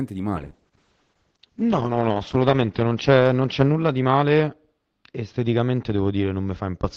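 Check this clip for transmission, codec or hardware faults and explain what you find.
One transmission fault is present: a call bitrate drop from 0.37 s through to the end of the clip. The call's bandwidth estimate fell, and the encoder was forced to work with far fewer bits. The change fits a fall from around 32 kbps to 8 kbps, which is lowest for about 1.6 s. The speech is coded more coarsely and its upper band shrinks from 20 kHz to 8 kHz, so it sounds muffled and rough.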